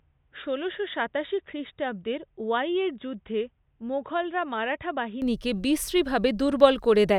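Input switched to a poorer device, from the start to 5.22 s: the speech has nothing above 3.8 kHz, so it sounds dull and boxy, sits roughly 10 dB quieter, and carries a faint noise floor far below the speech. At 5.22 s the full band and level return with no gap. The likely cause is a lesser microphone or a headset's call profile, whose narrow passband strips the upper range, before the system moved back to the better input.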